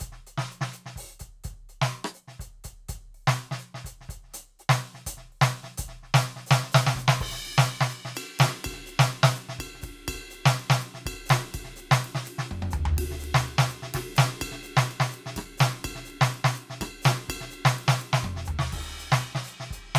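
No technical faults detected.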